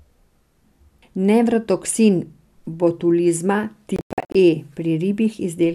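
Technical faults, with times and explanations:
3.96–4.35 s, digital broadcast dropout: the speech breaks into several short silences, together about 264 ms of missing sound spread across roughly 384 ms, the longest gap lasting 96 ms. The receiver muted whenever incoming frames failed their check and unmuted as soon as good ones returned. The holes fall in whole steps that fit frames of about 24 ms each. That sets it apart from packet-loss concealment: these gaps are true silence, with nothing smeared or repeated, and the sound resumes further along.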